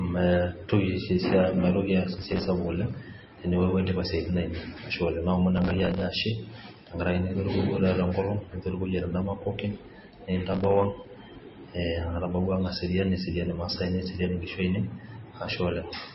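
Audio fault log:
throughout: MP3 compression, heavy damage. Nothing remains above 5.6 kHz, and the speech has a watery, swirling texture. This is likely a low-bitrate encode, around 24 kbps. Unlike a plain low-pass filter, the lost detail flickers from frame to frame instead of simply dulling the top end.
2.14–2.47 s, 5.57–6.04 s, 10.52–10.85 s: processor overload crackle. In each burst, dozens of buffers of a few milliseconds each miss their deadline, and stale audio is replayed with hard edges. That produces gritty tearing over the speech rather than clean silent dropouts, and it stops once the load eases.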